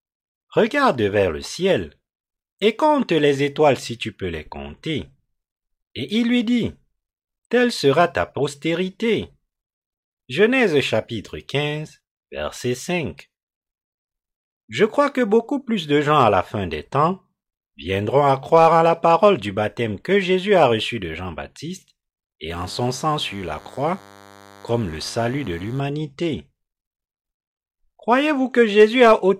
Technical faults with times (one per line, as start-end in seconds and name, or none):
22.50-25.80 DECT cordless phone buzz